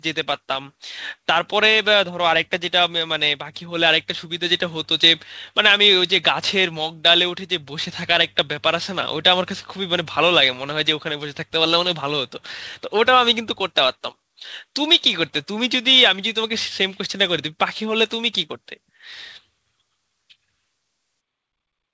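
Speech heard through a call path whose band stops at 8 kHz, consistent with wideband G.722. The fault is automatic gain rising: from 0.46 s to 11.46 s the level climbs by about 3 dB as the gain control, judging the input too quiet, slowly raises it. What separates this from compressor pumping is that voice and background noise swell together in one long, steady ramp, with no quick duck-and-recover following individual syllables.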